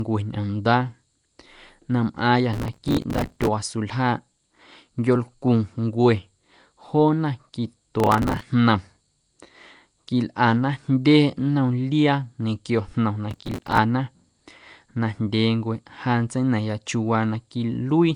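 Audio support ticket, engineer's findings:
Nellymoser compression, throughout. Rough, hissy halo and smeared, underwater tone on all speech; nothing above 10.6 kHz. Likely cause: Flash-era Nellymoser Asao path, with a fixed two-bit budget per sample over short blocks. Weak bands get no bits and are noise-filled, hence the hiss. Damage plainly audible; the sound points to a fairly high bitrate, around 44 kbps.

Processor overload crackle, 2.54–3.48 s, right after "na mꞌaaⁿyâ". Gritty tearing burst. Audio callback missing deadlines back to back; each missed short buffer (a few ms) replays old audio with hard edges. Many dozens in a row.

Processor overload crackle, 8.00–8.43 s. Same mechanism, shorter run of a few dozen misses.

Processor overload crackle, 13.31–13.78 s, after "liaa ñequio jnom na". Same stale-buffer crackle, clears once load passes.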